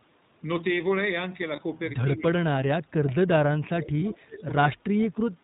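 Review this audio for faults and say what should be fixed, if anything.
The whole clip carries iLBC codec coloration. The speech is band-limited to below 4 kHz and has a slightly rough, synthetic texture. This fits iLBC in its 20 ms frame mode at around 15.2 kbps, with each frame's excitation coded independently. To prevent it, negotiate a wideband codec such as Opus or G.722 where both endpoints support it.

Lost iLBC frames occur at 1.56–1.60 s and 4.00–4.03 s. Each gap is filled by a short, buzzy held sound that repeats the last pitch cycle mixed with noise. Each is consistent with a single dropped 20 ms frame, and the speech recovers immediately afterward. To prevent it, reduce packet loss on the network path and size the jitter buffer for the observed arrival variation.

Speech suppressed in double talk appears from 2.16 to 4.52 s, with attenuation reaching about 35 dB and roughly two seconds affected in total. 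It appears again from 4.72 to 5.17 s, dipping by about 20 dB over roughly 0.3 s. The talker's level drops, which is likely an echo canceller turning down the near-end talker along with the loudspeaker echo while both parties spoke. To prevent it, tune the echo canceller's double-talk detection so it preserves near-end speech instead of gating it.

An echo leak is audible at 4.39–4.44 s as a brief, faint copy of the speech. It arrives 156 ms late, at about 25 dB below the main signal. The likely cause is a loudspeaker on one side whose echo canceller let residual pickup through. To prevent it, improve that side's echo cancellation or have that side use a headset.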